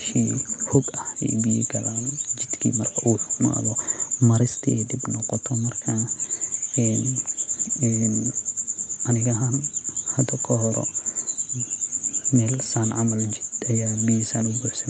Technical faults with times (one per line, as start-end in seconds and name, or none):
none